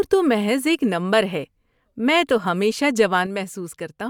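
From 3.26 s to the end, the speech level falls abruptly by about 6 dB, the mark of one channel dropping out, likely one stereo side lost before the mono sum. On the waveform the envelope steps down to half height, while the spectrogram dims evenly across all frequencies.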